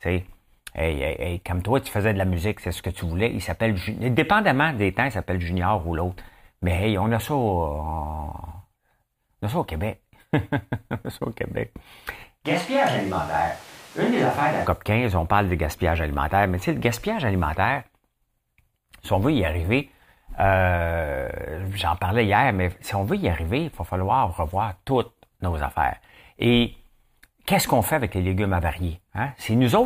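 At 12.47 s the speech suddenly goes roomy and hollow, losing its low end and dropping by something like 5 dB, with the room's background noise sitting noticeably closer, only about 25 dB under the voice. It snaps back at 14.65 s just as abruptly. That's most likely a switch to a distant microphone, where the close mic's feed dropped out and a mic further away, picking up more room, covered those two seconds.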